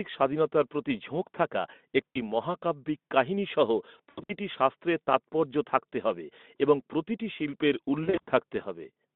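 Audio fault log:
2.11–2.33 s, 3.98–4.36 s and 8.04–8.29 s, VoIP packet loss concealed by the speech codec: the decoder fills the gaps by stretching its last pitch and filter into a fading buzzy or noisy smear that lingers after packets return. First comes after "স্বাধীনতার প্রতি ঝোঁক থাকা" (60 ms missing), then scattered losses of 180 and 160 ms.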